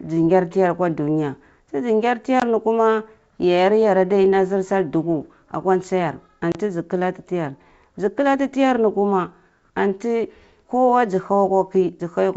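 Right after "akwa dunya tizi ngar", at 2.40 to 2.43 s, there's packet loss on the ADPCM call: about 20 ms drops to silence, likely two packets, and "ni kuma" comes back slightly distorted as the decoder's predictor resyncs. A 30 ms hole follows at 6.52 to 6.57 s.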